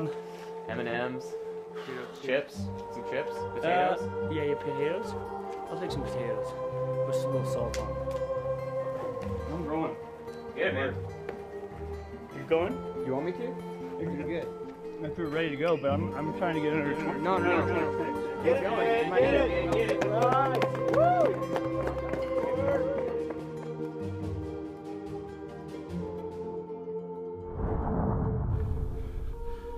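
From 16.86 s to 18.44 s the audio carries a doubled audio track: a second, full-band copy of the same sound trails the original by around 300 ms, roughly 5 dB quieter, with no decay or room colour. It likely comes from a slower capture path or an edit holding two copies out of step. It sounds like a flat, hard echo that cuts in and out abruptly. On a spectrogram every feature repeats as a fainter shifted duplicate; the waveform shows overlapping, offset envelopes.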